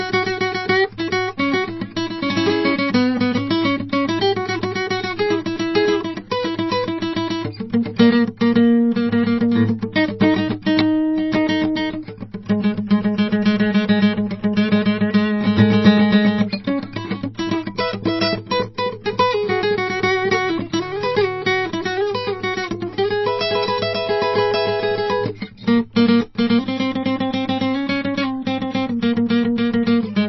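Throughout, the music sounds watery and swirly with nothing above 5.8 kHz, likely MP3 compression at a very low bitrate, consistent with about 24 kbps.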